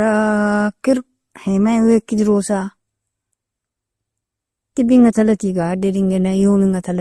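Throughout the speech, nothing is present above 12.2 kHz, and smeared, swirly MP3-style artefacts sit alongside Opus-style graininess. This likely reflects transcoding between lossy codecs, consistent with roughly 48 kbit/s MP3 re-encoded to 32 kbit/s Opus, the Opus layer compounding the MP3 layer's damage.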